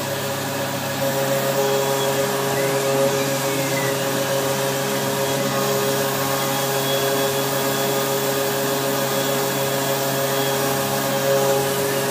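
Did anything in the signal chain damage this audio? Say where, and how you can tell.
No, nothing I can hear points to damage anywhere along the chain, so there's no stage to blame here.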